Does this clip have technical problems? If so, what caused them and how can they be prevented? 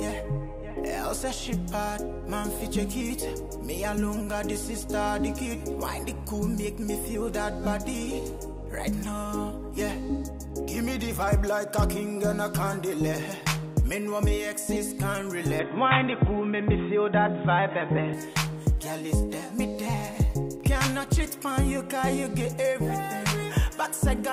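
Yes. From 15.59 to 18.14 s the sound goes dull and boxy with nothing above 3.8 kHz, a faint new noise floor and no gap or level jump, most likely an input switched to a poorer device before switching back. Locking the input device in settings prevents it.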